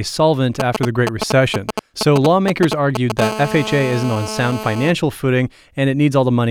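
GSM signalling bursts run from 0.60 to 3.21 s: a nearby 2G phone sends short groups of radio pulses, which the audio circuit rectifies into a galloping dit-dit-dit of brief 217 Hz buzzes, roughly as loud as the speech itself.

GSM phone buzz follows from 3.22 to 4.91 s, as the phone settles into a call and transmits steadily at 217 bursts per second. The rectified pulses give a hard, raspy 217 Hz buzz rich in harmonics, about 9 dB below the speech and unrelated to it.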